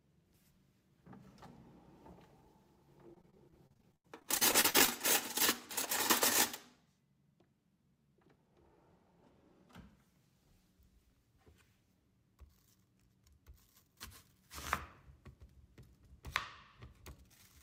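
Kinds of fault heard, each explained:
Repeated packet loss (robotic sound): From 3.07 to 4.89 s, about two dozen short holes, the longest 80 ms, are patched by stretching the preceding sound. Roughly a quarter of that stretch is filled in, so it turns choppy, unlike a single clean dropout.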